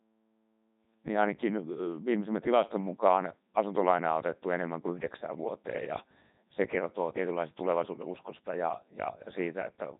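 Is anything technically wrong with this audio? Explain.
Yes. Throughout, the speech has passed through the Codec 2 vocoder, and the damage is heavy. Rather than keeping the waveform, the codec sends only pitch, voicing, energy and a coarse spectral envelope, and the decoder rebuilds the voice from sine waves. The result sounds robotic and buzzy, with a synthetic quality, which fits Codec 2's top 3.2 kbit/s mode. Nothing survives above about 3.8 kHz, so the sound is dull and narrowband.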